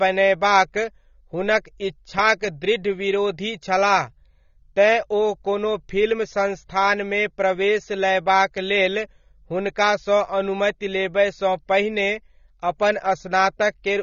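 AAC compression throughout: nothing sounds above 7.3 kHz, leaving the speech plainly dull and smeared, likely from AAC-LC quantising coarsely at a low bitrate near 24 kbps.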